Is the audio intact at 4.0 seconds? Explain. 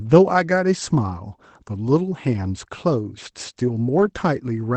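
No. From 3.97 to 4.07 s a lost packet was rebuilt from error correction. The rebuilt stretch, about 60 ms, fits several lost 20 ms Opus packets. Each missing packet was replaced with the low-bitrate redundant copy carried in the packet that followed, so the decoder played it without a gap. Those frames sound rougher and noisier than the 24 kbps audio of the call path around them.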